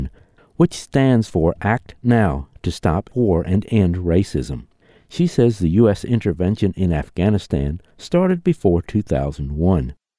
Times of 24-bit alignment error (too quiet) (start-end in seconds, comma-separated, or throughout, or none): none